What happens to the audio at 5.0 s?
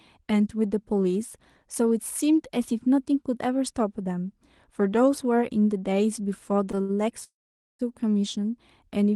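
Nothing goes wrong at 5.0 s: the speech carries on intact through that moment, with only the band-limited, coded character of the call path it travels through.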